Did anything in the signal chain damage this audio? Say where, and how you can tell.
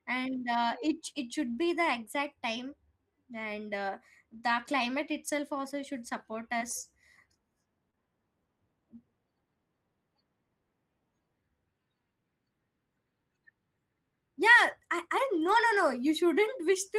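Yes, at the network stage, twice. Around 0.87 to 0.93 s, just before "it should be", and again at 15.47 to 15.57 s, the sound turns briefly rougher and noisier without dropping out. That is a lost packet rebuilt from error correction. The decoder played a low-bitrate copy carried in the following packet.

The network stage also left scattered short gaps between 3.39 and 7.99 s. There are about three brief ticks or smears, each under about 30 ms. Late or lost packets left small holes. The receiver filled each one by extending the preceding sound, so the rest stays clear.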